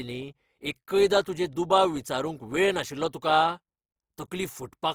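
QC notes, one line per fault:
Throughout, Opus compression: the speech turns rough and grainy, with hiss-like texture in place of clean harmonic detail, and the damage is plainly audible. Content extends to 20.4 kHz. This likely comes from CELT-mode noise filling of starved bands, which fits about 24 kbps.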